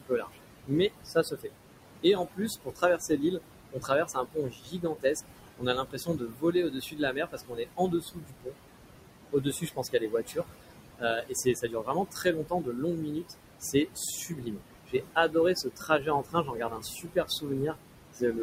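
Noise suppressor artifacts run through the whole of this speech recording. The suppressor pulls the room noise down by about 21 dB in the bands it judges to be steady noise, frame by frame. That noise sits only about 9 dB below the voice, so the background drops away in the pauses and swells back under speech. Speech cut by the noise suppressor occurs in six stretches: 0.0 to 1.5 s, 2.03 to 5.16 s, 5.57 to 8.55 s, 9.32 to 10.46 s, 10.98 to 17.77 s and 18.14 to 18.39 s. Within each stretch the suppressor mistakes quiet parts of the speech for noise and lowers them by up to about 21 dB, or about 16 to 19 dB in the shorter spans. Softer sounds and word endings come out swallowed or faint, adding up to about 0.7 to 2 seconds in the early spans and around four seconds in the longest.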